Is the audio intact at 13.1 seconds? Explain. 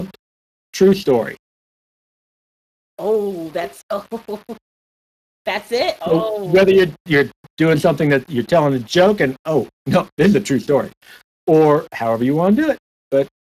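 No. At 13.1 seconds the clip carries two faults that run through its whole length.

Low bit depth without dither: a grainy, signal-following distortion sits around 30 dB below the speech. It is likely caused by rounding to only a few levels with no dither, which fits 7-bit resolution. The error tracks the waveform, so quieter passages turn gritty rather than hissy.

Speex codec: plainly audible coding damage makes the speech noisy and hoarse, consistent with CELP coding at a rate near 22 kbps. Spare excitation bits leave a rough texture. Above 8 kHz the content is only a shaped noise fill, and nothing remains above 15.3 kHz.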